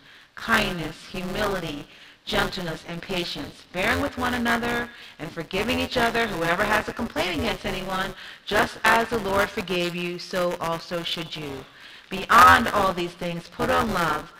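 Throughout the clip there is buffer tearing: the program filling the ring buffer and the hardware reading it have drifted until they cross inside every period, so about a fifth of each buffer replays audio from roughly 20 ms earlier, butted against the current audio with hard joins on both sides. The result is a constant robotic buzz at 172 Hz, which fits a 256-sample buffer, riding on the sound wherever signal is present.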